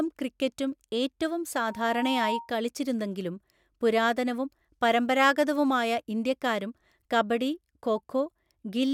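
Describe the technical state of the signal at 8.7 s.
At 8.7 s the speech signal is intact, with no audible technical fault at that moment.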